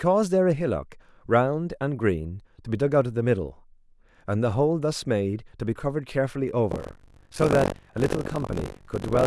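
Speech, with buffer tearing from 6.70 s to the end of the clip. The playback writer and the hardware reader have drifted so that their positions cross within every period, and about a fifth of each buffer carries audio from roughly a tenth of a second earlier. The result is a rattling, robotic buzz at 46.9 Hz, which fits a 512-sample buffer. It is present only while speech is sounding. On a waveform, hard discontinuities recur at that spacing. A spectrogram shows regularly spaced vertical lines across the voiced energy.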